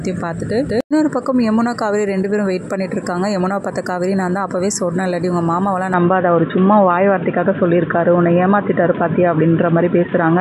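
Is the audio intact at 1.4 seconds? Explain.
Yes, at 1.4 seconds the audio plays through cleanly, with no dropout, click, distortion or other fault to be heard there.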